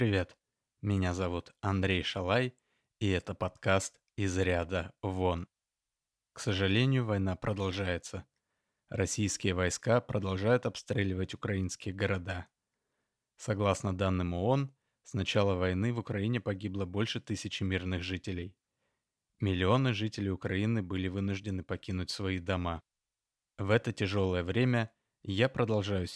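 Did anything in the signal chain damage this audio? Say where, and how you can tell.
No, nothing along the chain seems to have left a mark on this one; it's just the recording as it was captured, with nothing to trace back to any stage.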